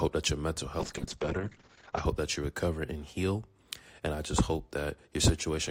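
From 0.82 to 2.11 s there's a call bitrate drop. The encoder was starved of bits, which fits a fall from about 48 kbps to roughly 7 kbps. For about 1.2 s the top end shrinks from 20 kHz to 8 kHz, so the sound goes muffled and rough until it recovers.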